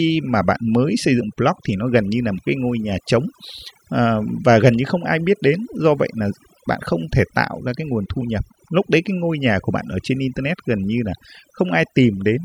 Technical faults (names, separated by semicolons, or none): overdone noise removal